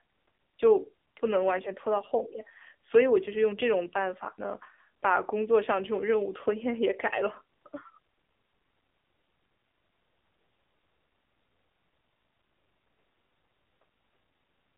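From start to finish, the speech passes through an AMR narrowband mobile codec. The sound is confined to a telephone band of roughly 300 Hz to 3.6 kHz. Nothing is heard above 3.7 kHz, so sibilants lose their edge and the low end feels thin. The codec rebuilds the voice from a vocal-tract model fed by sparse pulses. The damage is plainly audible: the voice sounds buzzy and synthetic, which fits a low rate near 7.4 kbps.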